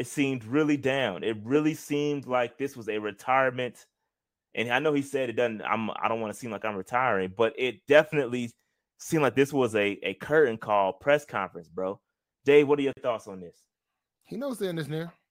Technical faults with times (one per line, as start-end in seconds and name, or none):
12.93-12.97 gap at a join of encoded pieces